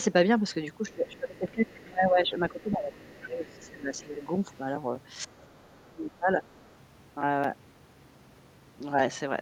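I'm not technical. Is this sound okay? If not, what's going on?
No. From 0.85 to 4.21 s and again from 5.26 to 6.40 s, the talker's voice sinks sharply or breaks into pieces. This is speech suppressed in double talk, likely from the echo canceller cutting both voices when both sides spoke. Unlike a weak connection, it happens only during overlap.

A faint second voice also comes through at 0.88 to 1.38 s, 2.5 to 4.26 s and 6.45 to 6.68 s. This is the other side's voice leaking through, likely loudspeaker sound the echo canceller missed. It's a separate, quieter person, not a delayed copy of the talker.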